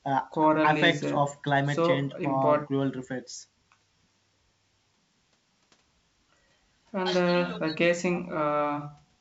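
No technical faults can be heard in this speech.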